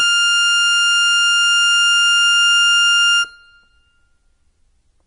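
From start to finish the music carries heavy MP3 compression damage, likely from a starved encoder at a low bitrate such as 32 kbps. Nothing survives above 10.5 kHz, and weak frequency lines flicker on and off between frames, giving a watery, swirling texture that a plain low-pass filter would never add.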